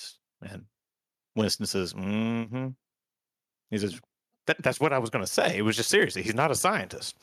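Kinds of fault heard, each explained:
No kinds of fault are heard in this clip.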